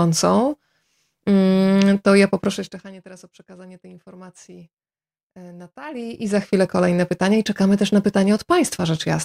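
From 2.45 to 2.94 s, zipper noise ticks over the speech as the level drops about 25 dB. It moves in unsmoothed 1 dB steps, some fifty a second, and each step clicks. From 5.85 to 6.49 s, it zips again, rising about 25 dB at around forty steps a second.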